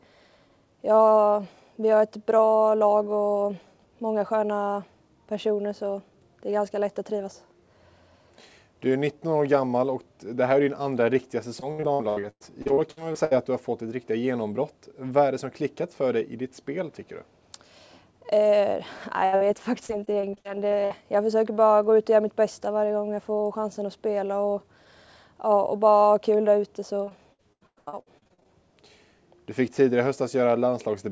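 From 11.60 to 13.33 s, packets are lost or arrive late again and again: 13 gaps, the longest about 96 ms. The receiver patches each one by extending the last sound, so roughly a third of that stretch is synthetic. The result is repeated packet loss with a choppy, robotic quality and pieces missing.

At 19.25 s a burst of packet loss removes about 80 ms at once. The receiver holds the last sound and lets it fade over roughly 76 ms before the audio resumes further on.

Right after, from 19.36 to 19.43 s, a short concealed packet loss drops about 40 ms. It is bridged and blended back, leaving a brief smear.

The same repeated loss returns at 19.87 to 20.92 s, with 8 gaps of up to 60 ms and about a fifth of the span filled. It comes back more heavily at 27.04 to 28.48 s, with 14 gaps of up to 97 ms covering about 42%, which makes the robotic chop strongest there.

Throughout, the call path cuts everything above 8 kHz, which fits G.722 at 64 kbps.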